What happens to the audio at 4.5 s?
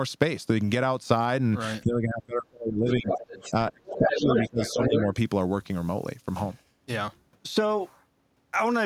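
At 4.5 s the talker's speech is being pushed down. This is speech suppressed in double talk, spanning 3.5 to 5.16 s. The level dips hard, by roughly 25 dB at its deepest, and about a second of that stretch is cut or thinned in pieces. The likely cause is an echo canceller facing both sides talking at once. It cannot tell the near talker from the loudspeaker echo, so it turns everything down.

A second voice is also present at 4.5 s. This is the other side's voice leaking through, from 3.86 to 5.03 s. It sits at about the same level as the talker. The other side is likely playing from the talker's loudspeaker into the microphone, and the echo canceller leaves much of it in. The result is two voices competing while the main one keeps dropping out.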